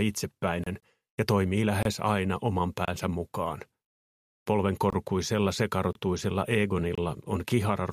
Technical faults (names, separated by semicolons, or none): Bluetooth dropout; gap between chunks